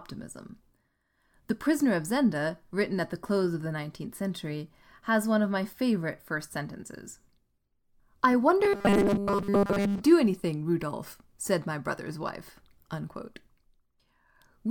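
From 8.64 to 10.02 s, the speech becomes a rigid, metallic 200 Hz buzz. This robotic sound likely comes from repeating short 5 ms buffers.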